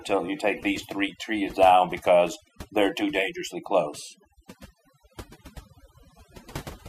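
Overdone noise removal runs through the whole recording. A noise reducer set far too aggressively pulls individual frequency bands down or out whenever they sit near its noise estimate, taking quieter parts of the speech with them, so the background drops and breaks up into twinkling specks. Loose connector crackle appears from 2.27 to 2.49 s. A worn or dirty contact rapidly makes and breaks the signal path, chopping the audio and, with any DC on the line, adding pops, heard as a brief irregular burst of scratchy crackle.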